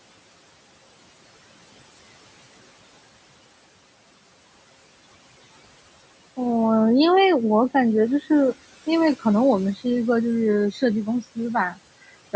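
Throughout, noise suppressor artifacts: bands judged steady noise are cut by about 18 dB frame by frame, so the room noise sinks in pauses and returns under speech.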